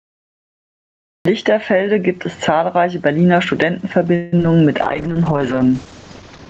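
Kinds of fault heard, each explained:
Gain pumping: The gain swings by around 15 dB on loud speech, pulling loud and soft parts closer in level, so the level sounds squashed. Too much input gain, with a fast limiter clamping down on every peak, is the likely cause.
Cut-off start: The clip opens on dead digital silence, and the speech then begins abruptly at 1.25 s, mid-sound, with no natural attack or fade-in. The recording or stream started late and caught the talker partway through a sound.
Call audio freeze: From 4.15 to 4.33 s the last sound hangs on as a fading buzz or hiss for about 0.17 s, then the speech carries on exactly where it stopped, with nothing skipped. This likely comes from late packets draining the jitter buffer, which inserted a gap.
Short concealed packet loss: Two brief smears or wobbles follow, at 4.35 s and from 4.37 to 4.39 s. Each time about 10 ms of audio failed to arrive, and the receiver patched the hole by extending the preceding sound before blending back in.
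Call bitrate drop: From 4.83 s to the end, the speech turns rough and watery as the Opus encoder falls from 32 to 11 kbps. A lowered bandwidth estimate forced much coarser coding, and the quality does not recover before the clip ends.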